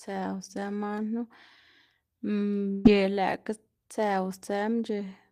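Speech, with a burst of packet loss from 2.71 s to 2.87 s. About 140 ms of audio never arrives, and the receiver fills roughly 134 ms of that gap by extending the last sound heard while lowering its level, so a brief stretched, fading sound replaces the missing speech before it resumes further along. On a waveform this appears as a shrinking continuation of the last sound with no flat silence. A spectrogram shows frozen, smeared bands that taper off, then an abrupt jump.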